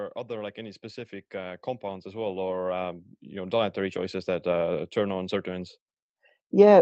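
An automatic gain rising fault affects this speech clip: the gain control judged the input too quiet and kept raising its gain from 0.27 s to 5.75 s, by about 15 dB in total. Voice and background noise swell together, with no sudden jump. The audio is band-limited to roughly 8 kHz, which fits a call codec such as Opus.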